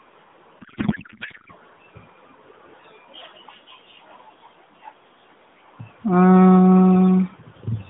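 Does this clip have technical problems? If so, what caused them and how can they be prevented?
Yes. From 0.60 to 1.52 s there is a codec payload misread. The receiver unpacked the AMR frames with the wrong bit layout, which fits octet-aligned frames being read as bandwidth-efficient. For that stretch the speech becomes garbled, warbling noise that barely tracks it, until the narrowband AMR sound returns. To prevent it, make both ends negotiate and use the same AMR payload format, octet-aligned or bandwidth-efficient, throughout the call.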